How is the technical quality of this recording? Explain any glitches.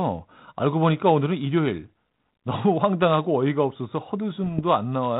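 The recording carries one glitch, heard over the light coding damage and 4 kHz band limit of 32 kbit/s G.726 ADPCM coding. From 4.46 to 4.62 s come bit errors on an ADPCM link. Flipped bits, around a third of a percent, upset the decoder's step size and predictor. The result is pops and rough bursts with brief level jumps.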